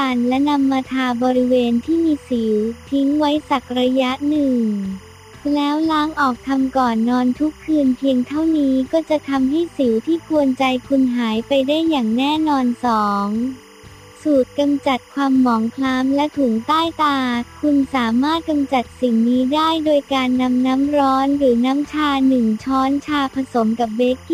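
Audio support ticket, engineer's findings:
Steady chirping warble behind the sound, whole clip, about 30 dB down, pitches near 1 and 2 kHz. Timecode bleed: LTC square wave leaking from an adjacent track or cable; rhythm fits 25 fps code.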